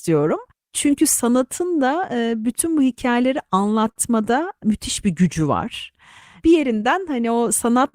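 All the way through, the sender's clock runs about 5% slow against the receiver's, which is classic clock drift between sender and receiver. The receiver consumes audio faster than it arrives, so its jitter buffer keeps draining. That underlying mismatch explains the timing corrections you hear, because the receiver spends the whole clip scrambling to stay fed rather than settling into a steady rhythm.

From about 0.09 s to 7.79 s you get the repeated timing corrections. The receiver keeps repeating tiny slivers of audio to stretch what it has, all in the same direction and unevenly spaced. Overall it pads out roughly a third of a second, so playback effectively runs at 96% speed. You hear it as a slightly dragging, unsteady tempo with the odd faint hiccup, not as any single obvious glitch.

At 3.91 s there's a short stall from a late packet. The buffer actually ran dry, so the receiver held the last sound for 44 ms until the packet turned up, then carried on from the same spot. 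Nothing is lost, but that moment sounds briefly frozen, with a slight buzz or dip.

Between 5.34 s and 6.61 s there are scattered short gaps, about three of them, each around 10 ms at most and only a few tens of milliseconds in total. The receiver bridges each one by continuing the previous sound, so they come across as small ticks or smears in an otherwise continuous stretch.

Right at the end, at 7.88 s, there's another short stall from a late packet. The buffer empties again and the receiver stretches the final sound for 55 ms, so the clip closes on a held tail with a slight buzz or dip.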